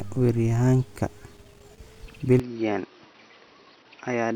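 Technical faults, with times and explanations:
2.40 s to 4.35 s, input switched to a poorer device: the speech abruptly turns duller and about 5 dB quieter with no gap, losing everything above 5.9 kHz while a new noise floor appears around 30 dB below it, likely from recording moving to a narrower-band microphone.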